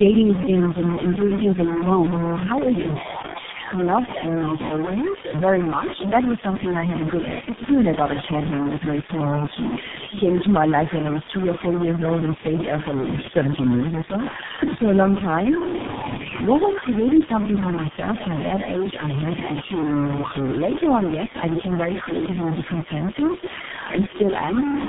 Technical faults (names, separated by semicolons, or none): low bit depth without dither; tandem speech coding